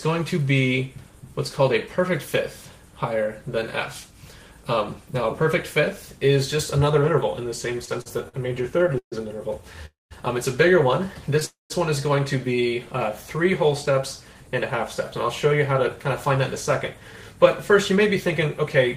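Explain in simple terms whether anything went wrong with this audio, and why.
Between 7.73 and 9.14 s the audio shows repeated stalls (stutter). Packets kept arriving late, so the receiver's jitter buffer ran dry 13 times, and each time the receiver stretched the last bit of sound to fill the wait. Those fills add up to 339 ms, about a quarter of that stretch, with the longest single one at 136 ms. Nothing is lost, but the sound drags and hiccups.

Two call audio freezes follow, at 9.86 to 10.13 s and at 11.45 to 11.72 s. Each puts a gap of about 250 ms into the audio. The last sound carries on briefly, then fades, leaving 180 ms of silence in the first and 160 ms in the second. Afterwards the audio resumes where it left off, so nothing is missing, just delayed. The likely cause is packets held up in transit until the buffer emptied.

From 15.12 to 18.79 s there is a jitter buffer speed-up. 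The buffer was holding more audio than it needed. To catch up, the receiver repeatedly cut out tiny slices, removing around a fifth of a second in total. The pitch stays the same, but playback runs at 105% speed, which is enough to sound hurried.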